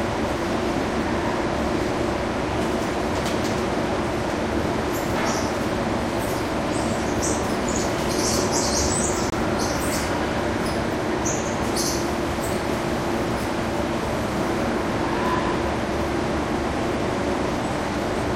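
At 9.30 s the sound drops out abruptly into silence for about 32 ms, until 9.33 s. This is a corrupt frame muted. A damaged compressed frame was rejected by the decoder, and silence was substituted. The short gap points to a single frame. Timing stays intact.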